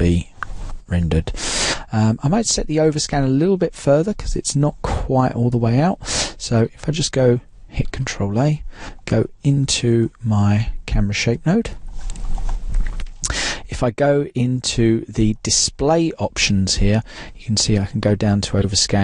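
Corrupt frame decoded at 9.83 to 9.85 s, 15.08 to 15.11 s and 18.59 to 18.65 s: damaged compressed frames were played anyway, misplacing energy into brief chirps, squeaks, blips or bursts of noise. The first is moderate, the second faint, and the last, spanning about two frames, is loud, peaking around -5 dBFS.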